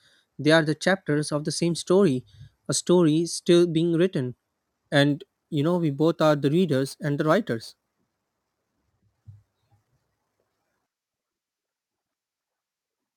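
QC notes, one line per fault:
5.10 to 13.16 s, crude rate conversion: a gritty, inharmonic fizz rides on loud and bright syllables, roughly 30 dB below the speech. Samples are repeated without any filtering, which fits a 44.1 kHz to 48 kHz conversion done by nearest-sample picking.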